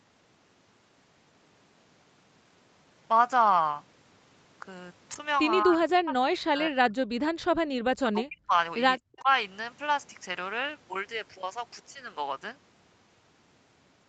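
From 5.64 to 6.99 s, 7.71 to 8.53 s and 9.05 to 9.30 s the speech sinks sharply, by about 35 to 40 dB at its deepest. This is likely speech suppressed in double talk: with both sides talking, the echo canceller turned everything down.

Between 9.18 and 9.22 s a faint scrap of the voice returns about 210 ms late, roughly 35 dB under the speech. It is an echo leak: the far end's canceller likely let loudspeaker sound from its microphone slip back into the call.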